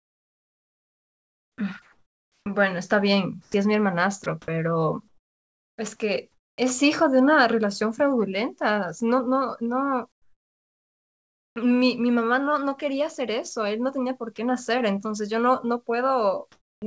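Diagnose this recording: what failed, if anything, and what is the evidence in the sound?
Sound chopped by the voice detector, 0.00 to 6.58 s: the speech repeatedly cuts to synthetic fill, about 3.3 s in total, likely call-side voice detection toggling transmission on and off.

Comfort noise in place of the background, 10.12 to 11.56 s and 16.52 to 16.82 s: the real room tone is replaced by flat, featureless noise, about 9 dB quieter in the first pause and about 4 dB louder in the second, likely from discontinuous transmission during silence.

Sound dropped by the voice detector, 14.36 to 14.38 s: a brief piece of sound gives way to comfort noise for 20 ms, likely because the call processing judged it to be background.

Onset clipped by the voice detector, 16.80 to 16.82 s: the next sound starts abruptly, with its first 20 ms replaced by noise, likely because the detector resumed sending too late.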